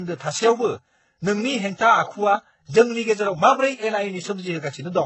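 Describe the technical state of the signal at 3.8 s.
At 3.8 s the speech carries artefacts of transcoding between lossy codecs, present across the whole clip. The sound likely passed through a very low-rate HE-AAC stage and then AAC-LC, so the artefacts of both are heard together. A spectrogram shows nothing above 8 kHz.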